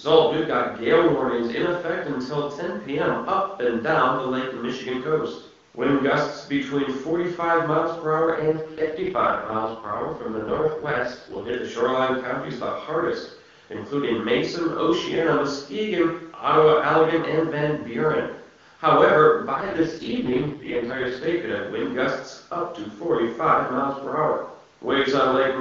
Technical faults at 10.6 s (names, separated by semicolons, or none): AMR rate drop